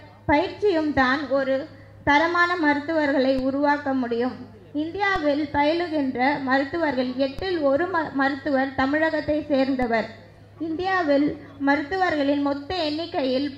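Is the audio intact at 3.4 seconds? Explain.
No. At 3.39 s there is a DC step: the waveform's zero line suddenly jumps to an offset of about −20 dBFS, as if a converter recalibrated or an input carrying DC was switched into the path. The offset does not hold. It drains away through a high-pass at around 20 Hz. The abrupt shift is heard as a single low thump at that instant, while the sound itself carries on unchanged through it.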